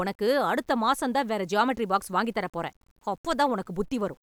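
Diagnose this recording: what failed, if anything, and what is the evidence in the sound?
Low bit depth without dither, likely from sample-format conversion: grit follows the speech, about 40 dB down, fitting 9-bit rounding, unlike constant dither hiss.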